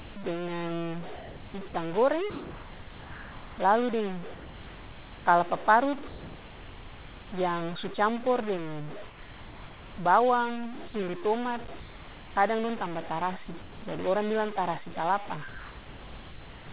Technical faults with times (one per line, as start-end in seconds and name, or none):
0.00-16.72 stuck bit
0.00-0.16 sound dropped by the voice detector
1.16-5.26 sound chopped by the voice detector
6.08-7.32 sound dropped by the voice detector
9.08-9.98 sound dropped by the voice detector
10.90-10.94 sound dropped by the voice detector
11.80-12.36 sound dropped by the voice detector
13.46-13.82 sound chopped by the voice detector
15.48-16.68 sound dropped by the voice detector